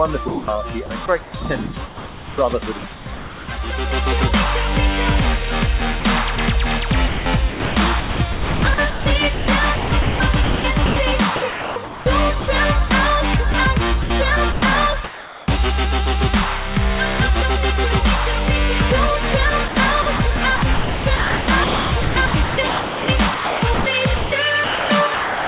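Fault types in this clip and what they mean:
Sound chopped by the voice detector: the sender's voice detector likely kept toggling, so quieter bits got swapped for comfort noise, from 60 ms up to about 3 s in total per affected span, giving choppy audio.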